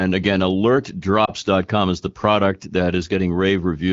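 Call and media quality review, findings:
Lost AMR speech frames, 1.25 to 1.30 s, just before "is the product that". Brief dip or warble where one 20 ms frame failed its checksum over the radio link. AMR-WB decoder concealed it by repeating the last good pitch and vocal tract settings at reduced gain, then recovered with a momentary weak or rough onset. Surrounding speech is clear and band-limited near 7 kHz, which fits AMR-WB at around 12.65 kbit/s.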